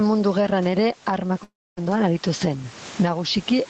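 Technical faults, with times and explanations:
Throughout: gain pumping. The level swings about 15 dB, squashing loud and soft parts closer together, likely from a fast limiter fighting excessive gain.
1.43 to 1.79 s: long network dropout. About 340 ms of speech is lost. A fading fill decays into roughly a quarter second of silence, likely because audio stopped arriving.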